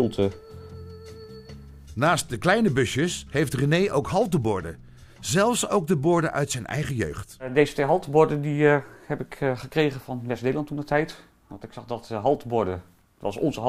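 Two brief skips at 4.45 s and 5.25 s, with the audio jumping ahead about 20 ms and 5 ms, likely come from dropped buffers (overrun).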